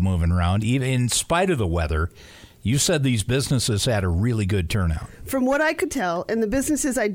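No technical faults can be heard anywhere in the recording, and the signal holds steady with no dropouts, glitches or disturbances at any point.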